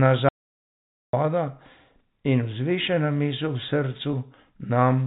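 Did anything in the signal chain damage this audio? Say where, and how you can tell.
Yes, at two stages. The first audio dropout to silence runs from 0.29 to 1.13 s, about 0.85 s. The audio stops mid-flow and comes back just as abruptly, and the gap between is digital silence with no room tone at all. That points upstream of the recorder, most likely at the input or capture stage: the source was lost through a disconnect, a failed link or a mute, while the recorder kept writing silence. Whatever sounded in that stretch is gone.

The second fault is at the network stage: packet loss with pitch repetition at 4.12 s. For about 10 ms, which fits one lost packet, the receiver had nothing to play and bridged the hole by repeating the last pitch period of the G.711 telephone coding stream, whose band stops at 4 kHz. The gap is short enough that the repetition never fades to silence. It comes across as a brief held, slightly buzzy catch before the normal signal resumes.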